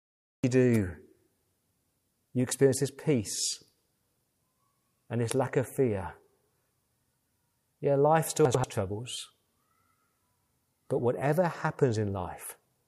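The clip opens on a cut-off start: the first 0.44 s is digital silence, and the speech appears abruptly at 0.44 s, already mid-sound. Capture began late, so the natural onset was never recorded. On a waveform, a flat line jumps straight to full-amplitude speech with no rising envelope. A spectrogram shows a blank band that ends in a sharp vertical edge, with energy across all frequencies switching on at once rather than building up.

Right after "life still", between 8.45 and 8.64 s, the audio has chunks out of order. A block about 93 ms long arrived one chunk late, so it plays after the block that should follow it. No audio is missing, but the sequence is wrong and leaves three hard joins, heard as a brief jumbled, garbled moment. On a spectrogram, formant tracks break at vertical seams and jump to unrelated positions. The waveform shows abrupt discontinuities where the segments meet.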